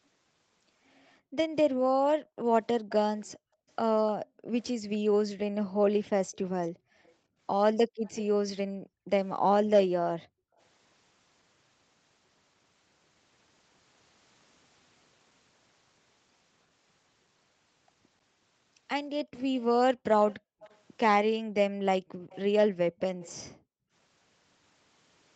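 In this speech recording, a loudspeaker-side echo canceller clamps the microphone hard whenever far-end audio plays, producing background gated by the echo canceller between 1.2 and 10.59 s and again between 20.4 and 23.92 s. The room tone dips by up to about 40 dB, totalling around three seconds in the first stretch and around a second and a half in the second, then swells back as the canceller releases. The same canceller is likely also failing to fully subtract what its microphone hears, so residual loudspeaker sound gets sent back as an echo leak at 2.89–4.64 s, 6.32–8.22 s, 19.6–20.77 s and 22.3–23.33 s. Each time, a faint copy of the speech trails the original by 303 ms, about 20 dB below it in the first two passages and about 25 dB below in the last two. Throughout, the call path's Opus coding limits content to below 8 kHz.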